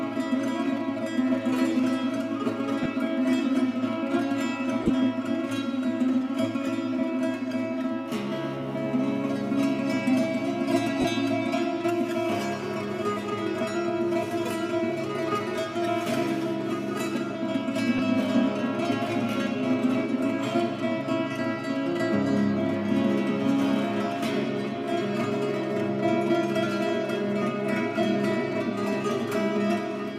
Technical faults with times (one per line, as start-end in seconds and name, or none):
2.83-2.86 lost LE Audio frames
4.83-4.90 lost LE Audio frames
11.01-11.05 lost LE Audio frames
17.98 lost LE Audio frames